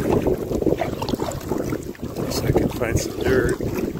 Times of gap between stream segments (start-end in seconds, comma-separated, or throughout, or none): 0.68